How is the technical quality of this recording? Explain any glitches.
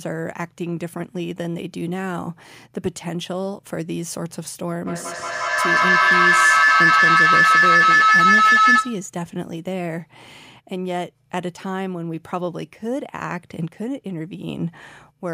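The recording has one serious fault, a feedback howl. From 4.87 s to 9.12 s, the microphone picks up its own output from a nearby loudspeaker on the same call, and each pass round the loop comes back louder. The repeats narrow into a tone around 1.5 kHz, pulsing roughly every fifth of a second and peaking about 12 dB above the speech. A spectrogram shows a bright horizontal line near 1.5 kHz with regular beats. The waveform swells well above the surrounding speech.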